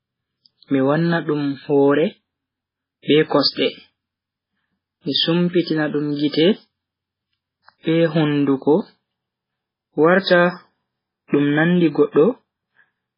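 Speech, and the whole 13 seconds carries heavy MP3 compression damage, likely from an encoder starved of bits. Nothing survives above about 5.3 kHz, so the treble is sliced off and s sounds go dull. The fainter parts of the spectrum keep dropping in and out between frames, giving the audio that watery, swirly texture. The overall degradation fits a very low bitrate, something around 16 kbps.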